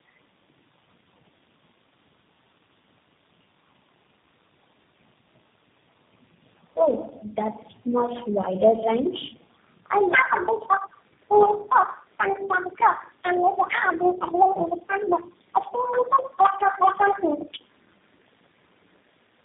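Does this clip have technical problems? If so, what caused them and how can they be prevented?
Yes. Throughout the speech there is tandem speech coding: rough, muffled, warbly sound with nothing above 3.6 kHz. This suggests three low-rate speech coders in a row, each re-encoding the previous one's degraded output. To prevent it, use transcoder-free operation or pass-through across network borders so that speech is encoded only once.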